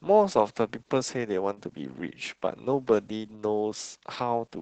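Throughout, the speech carries heavy Opus voice compression: the coder's linear-prediction mode squeezes the signal into an 8 kHz band and roughens its excitation, leaving a muffled, hoarse, faintly robotic tone, which points to roughly 10 kbps. Unlike a simple low-pass filter, the damage is grainy rather than merely dull.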